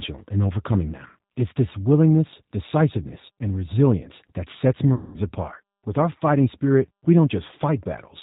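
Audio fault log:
throughout: G.729 codec (G.729A at 8 kbit/s). The speech is rebuilt from a vocal tract filter, a pitch predictor and a few pulses per frame, so it sounds plainly rough and synthetic. A spectrogram shows an empty band above a hard 4 kHz ceiling.
3.08–3.13 s and 4.94–5.18 s: VoIP packet loss concealed by the speech codec, with about 20 ms and 200 ms missing. The decoder repeats its last pitch and filter at falling gain, giving a stretched sound that fades. The second gap fits about ten 20 ms packets. Its waveform shows a decaying, overly regular stretch, and the speech stays weak briefly after it.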